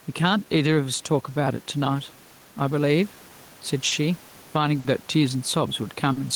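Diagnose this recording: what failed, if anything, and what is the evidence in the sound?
Gain pumping at the microphone input and call processing: the room noise, about 31 dB below the speech, swells in pauses and ducks under loud syllables by about 5 dB. A likely cause is excessive input gain driving a fast limiter. This is unlike a steady noise floor.

Clock drift between sender and receiver, at the network and jitter buffer: the sender's clock runs about 4% slow, so the buffer keeps draining. This is a continuous rate mismatch, not a single glitch.

Repeated timing corrections, at the receiver buffer, from 0.06 to 3.3 s: playback runs at 96% and adds around 150 ms in small, unevenly spaced stretches. The result is an unsteady tempo rather than audible gaps.

Short stall from a late packet, in the network and buffer, at 3.88–3.94 s, 4.80–4.87 s and 6.13–6.19 s: a sound is held for 40, 50 and 40 ms, then resumes. 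Nothing is missing, unlike a packet loss.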